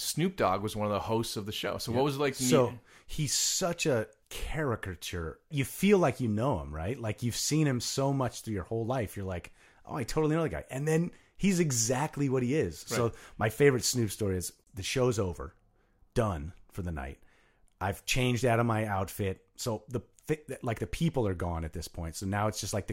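No technical faults are audible anywhere in the recording.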